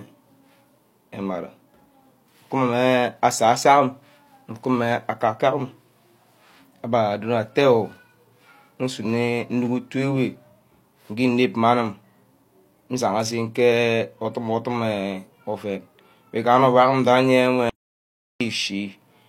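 At 17.69 s the speech cuts out mid-flow and only returns at 18.41 s, losing about 0.71 s. This audio dropout to silence was likely caused by the input briefly disconnecting. Unlike a natural pause, no room tone remains in the gap.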